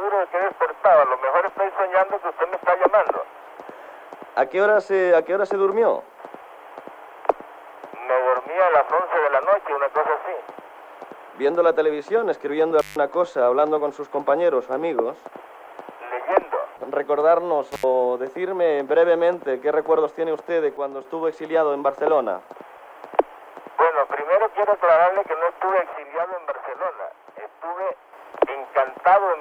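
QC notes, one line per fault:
12.79–12.96 s and 17.72–17.83 s, intermittent contact: the sound cuts out for about 150 ms and then about 71 ms, with crackle at each edge and only faint hiss or buzz while the line is open. A loose cable or plug is briefly breaking the connection. The signal disappears entirely rather than dropping in level, which separates it from a gain change, and the scratchy edges separate it from a clean digital dropout.
20.77–21.05 s and 25.93–28.13 s, sudden gain jump: the level falls by about 6 dB for roughly a quarter second, then by about 7 dB for just over two seconds. The sound and the background noise drop together in a single step and rise back the same way. The likely cause is a digital gain setting applied instantly, with no ramp. Unlike a fade or a compressor, the change is abrupt and the noise floor moves with the signal. Unlike the contact fault, the sound keeps going throughout.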